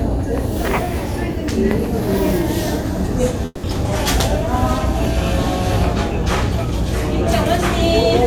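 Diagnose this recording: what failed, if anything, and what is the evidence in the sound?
Long network dropout, 3.45 to 3.65 s. For about 180 ms the last sound before the gap carries on as a fading buzz or hiss rather than new material, then a brief 20 ms of silence follows before the audio resumes further along, with that stretch simply absent. The stage is likely the network: incoming packets stopped, the receiver's concealment extended what it last had until it gave out, and playback rejoined the stream after the loss.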